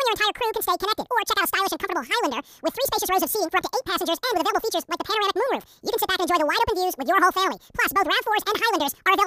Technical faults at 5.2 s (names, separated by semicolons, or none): audio read two samples at a time (double speed)